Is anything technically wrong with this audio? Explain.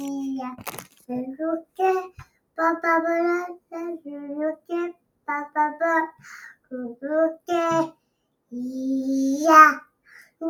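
Yes. A noise suppressor applied to music or sounds runs through the whole clip. A speech-oriented suppressor treats the steady parts of these sounds as noise, so the level swings by around 10 dB and the sound pumps and thins. Attacks mostly get through, which separates it from a dropout or a hard gate.

Sound cut by the noise suppressor occurs at 0.58–1.1, 1.62–1.79, 2.1–2.58, 3.58–3.73, 4.56–5.28, 6.12–6.72, 7.92–8.53 and 9.85–10.41 s. In each span the held material sinks by about 17 to 21 dB or its decay is cut short, while the sharper onsets survive.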